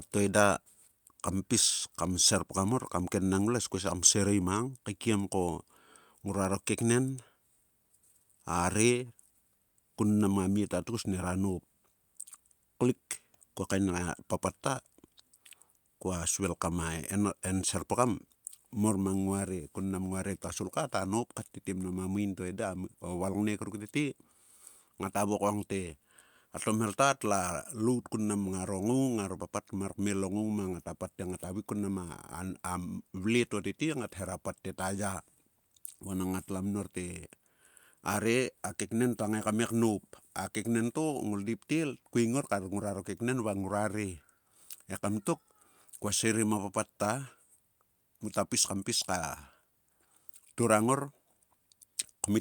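No technical faults can be heard anywhere in the recording.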